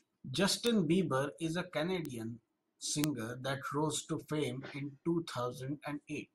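Three sharp, isolated ticks cut through this speech clip at 0.67 s, 2.05 s and 3.04 s, peaking at about -14, -20 and -8 dBFS, the last the loudest. Each is broadband and bears no relation to the voice around it. These are bit error spikes: a single flipped bit in storage or on a digital link throws one or two samples off by a power of two before the waveform snaps straight back.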